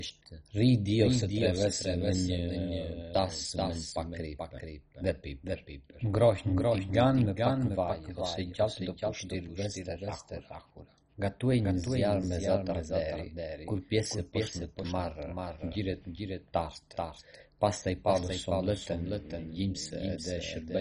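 Throughout, a doubled audio track trails the speech by roughly 400 ms, about 5 dB quieter and dry, likely from a second capture path; waveforms show repeated envelopes offset.

MP2 compression is heard across the whole clip as dull, gurgling granularity, fitting a rate near 32 kbps; the spectrogram shows nothing above 10.4 kHz and flickering upper bands.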